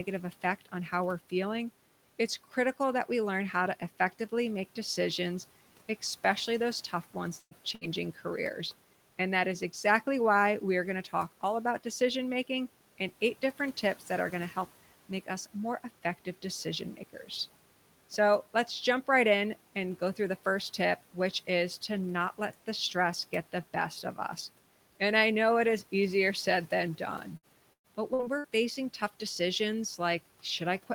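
At 7.39 s, right after "especially those tough ones", a burst of packet loss drops about 120 ms of audio. The receiver fills most of the hole, about 115 ms, by stretching the last sound and fading it, and then about 40 ms goes silent before the speech picks up further along. A second, shorter burst follows at 7.75 to 7.84 s, losing about 60 ms, heard as another brief smear and skip.

From 27.37 to 28.47 s, just after "easier said than done", repeated packet loss sets in. Five separate gaps, the longest 110 ms, remove about 300 ms of speech in all, and each is patched by extending the previous sound. Concealment covers about a quarter of this stretch, so the speech turns choppy and robotic, with pieces clipped out. The room noise sits roughly 23 dB below the speech.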